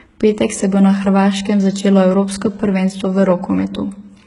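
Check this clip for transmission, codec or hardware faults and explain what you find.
One codec fault runs through the whole clip. HE-AAC compression, throughout: the treble sounds rebuilt by spectral band replication, with upper bands copied from lower ones under a coarse envelope. It is likely heavy low-bitrate coding, fitting roughly 12 kbps. Sibilants turn gritty and metallic, and nothing reaches above 11.1 kHz.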